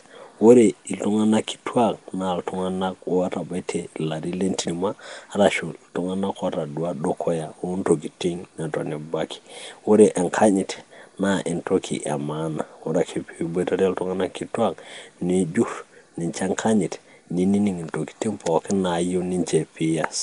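Across the whole recording the speech carries a rough, hissy halo and a smeared, underwater blur, with nothing above about 10.6 kHz. This is likely Nellymoser compression, which fills weak bands with noise, and the damage fits a bitrate near 44 kbps.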